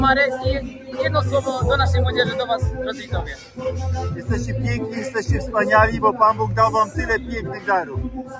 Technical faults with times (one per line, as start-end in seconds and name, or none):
0.00-8.39 noise suppressor applied to music or sounds
0.61-0.99 sound cut by the noise suppressor
2.92-3.12 sound cut by the noise suppressor
3.37-3.65 sound cut by the noise suppressor
8.18-8.39 sound cut by the noise suppressor